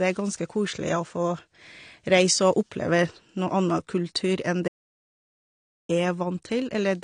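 Throughout the speech, nothing is present above 9.7 kHz. The top end is missing, and the artefacts of the earlier encode remain. The file itself is a high-bitrate MP3, but it cannot bring back what was lost. This is low-bitrate audio saved at a high bitrate. The source was likely a low-rate encode, near 32 kbit/s, later re-saved at a much higher rate. The re-encode only preserved the earlier damage.

At 4.68 s the audio cuts out abruptly. It returns at 5.89 s, after about 1.21 s of gap. The gap is silent, with no room tone or background left. This is an audio dropout to silence. The input was likely lost for a moment while recording continued, so silence was written in its place. Whatever was spoken during that stretch is gone.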